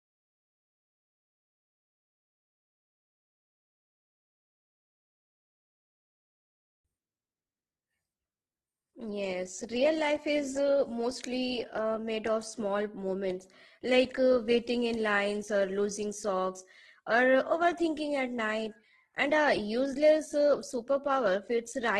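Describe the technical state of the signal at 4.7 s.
At 4.7 s the signal is intact, with no audible fault in the speech at that moment.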